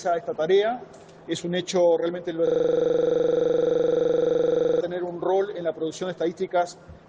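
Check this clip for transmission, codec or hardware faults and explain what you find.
One hardware fault is present. From 2.47 to 4.81 s there is a system hang loop: the system froze while the sound hardware kept replaying one 42.67 ms buffer, which fits a 2048-sample buffer. This produces a rattling 23.4 Hz buzz. The waveform shows identical repeating blocks, and the spectrogram shows evenly spaced vertical stripes.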